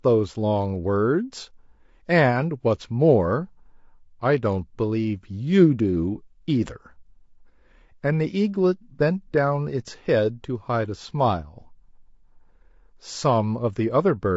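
From start to finish the speech sounds rough and grainy. A fine hiss sits between the pitch harmonics, so vowels lose their clean, ringing quality. The top band sounds thin and synthetic. The likely cause is low-delay AAC compression, the AAC-ELD kind used for video calls. Its short frames resolve voice harmonics poorly and spend more bits doing it. At this level of damage the sound points to a bitrate around 32 kbps.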